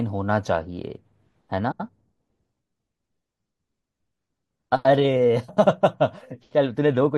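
Speech with frames out of order at 1.71 to 1.89 s and 5.48 to 5.66 s: two adjacent runs of about 85 ms swap places, fitting runs of four frames each, giving a garbled flutter. Unlike a dropout, no time is lost.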